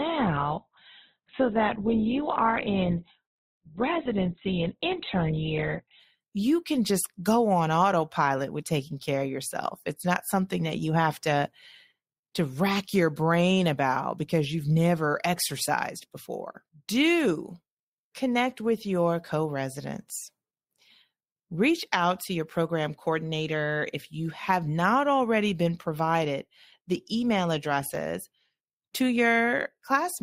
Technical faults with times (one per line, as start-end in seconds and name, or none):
0.00-6.00 adaptive stream starting at a low bitrate